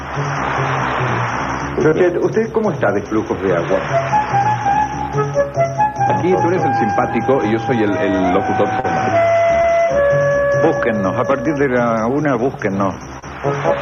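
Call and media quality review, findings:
Short concealed packet loss, four events: 1.89–1.94 s, 8.80–8.86 s, 9.62–9.65 s, 13.19–13.24 s. Jitter buffer/decoder, packets late or lost (about 20 ms of audio each, 40 ms at 8.80 s). Concealment extrapolates the preceding sound, pitch-based or as shaped noise, then crossfades back. Audible as brief smears or wobbles, with the 8.80 s gap longest.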